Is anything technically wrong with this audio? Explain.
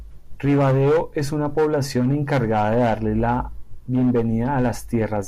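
No, nothing in this speech recording stood out as technically wrong on listening.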